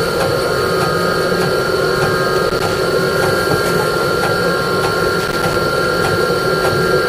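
At 2.35 to 2.80 s and again at 5.20 to 5.56 s, loose connector crackle breaks in: a worn contact intermittently opens, chopping the signal into irregular scratchy bursts. The waveform shows jagged dropouts and spikes, and the spectrogram shows broadband vertical streaks.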